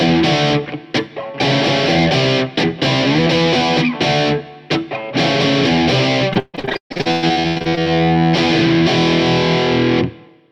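From 6.33 to 7.87 s the audio breaks into repeated packet loss with a robotic sound. Data arrived late or not at all, over and over. Each hole was patched by stretching the last good sound, so roughly 59% of that stretch is filler, with the longest gap near 142 ms. Unlike a single dropout or click, this is a rapid, robotic stutter where the sound keeps repeating itself and losing pieces throughout.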